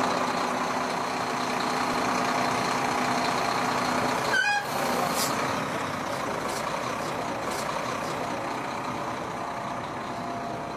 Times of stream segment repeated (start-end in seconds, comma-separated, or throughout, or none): 7.39-8.41